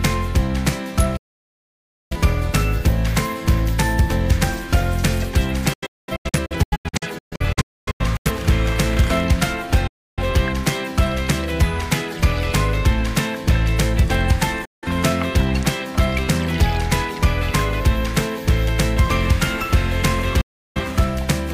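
At 1.17 s the sound drops out for roughly a second, a digital broadcast dropout. The receiver lost valid frames and muted, with an 8 ms fade at each edge. From 5.73 to 8.31 s it breaks into scattered holes totalling about 1.4 s, the longest 256 ms. Shorter mutes follow at 9.87 s (0.3 s), 14.65 s (0.17 s) and 20.41 s (0.34 s). The hole lengths fit frames of about 43 ms. Audio sent during each gap is lost.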